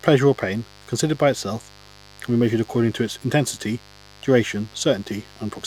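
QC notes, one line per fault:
Throughout, mains buzz. A steady, raspy buzz sits under the speech at roughly 25 dB below it. Sharp switching spikes enter twice per 50 Hz cycle. Their harmonics stack from 50 Hz up into several kilohertz. A dimmer, rectifier or missing shield is the path in.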